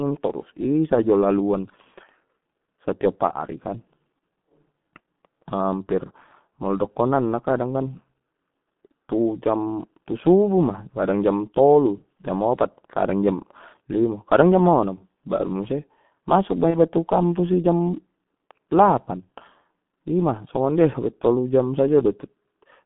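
The whole recording passes through the G.723.1 codec at 6.3 kbit/s. Only about 150 Hz to 3.5 kHz survives, so the speech sounds muffled, hoarse and smeared.

From 16.70 to 16.76 s, VoIP packet loss is concealed by the speech codec. The decoder fills the gap with a fading extrapolation, which fits one lost 30 ms frame.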